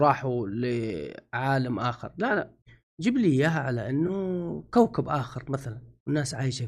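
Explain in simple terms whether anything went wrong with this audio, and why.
Around 4.07 to 4.10 seconds, a tiny piece of the audio failed to arrive. This is called AAC frame loss with concealment. The stream travels in small chunks, and about 20 milliseconds' worth went missing, which fits two chunks. The decoder covered the gap by reusing the last good sound with its fine detail scrambled, so you hear a brief smeared, hissy blip. The low-delay compression this likely came through isn't at fault.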